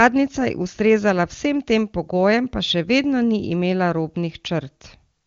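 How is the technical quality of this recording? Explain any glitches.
The recording has no technical faults; the speech is carried by the AMR wideband (HD Voice) codec at 23.85 kbit/s, a rate high enough that its coding damage is faint at most, and the audio stops at about 7.1 kHz, the top of that codec's band.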